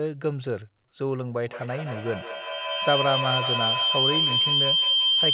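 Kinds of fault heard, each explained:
Feedback howl: from 1.47 s a tone near 3 kHz builds to about 4 dB above the speech, with the loop repeating roughly every 150 ms, from a self-reinforcing microphone-loudspeaker loop.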